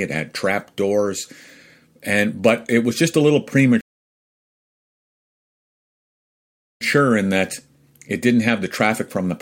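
Speech, interrupted by a rebuffering stall from 3.81 s to 6.81 s. After "was just a little" the audio drops to silence for 3.0 s, then picks up with "in that it didn't" at exactly the point where it stopped. The player's downloaded buffer ran dry, so playback halted until more data arrived. No material is skipped or repeated, but the pause adds 3 s to the running time.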